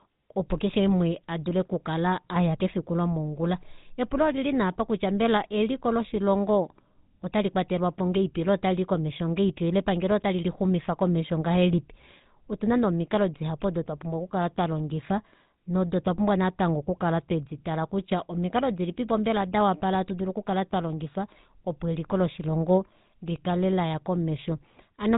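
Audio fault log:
Throughout: GSM full-rate codec. The speech has a plainly audible buzzy, gravelly roughness. Nothing comes through above 3.8 kHz, so the top end is gone and sibilants sound dull. The codec models the vocal tract as a filter and drives it with a sparse train of regularly spaced pulses, keeping only every third excitation sample. That coarse excitation produces the grainy buzz. The sound fits the 13 kbps GSM full-rate bitrate.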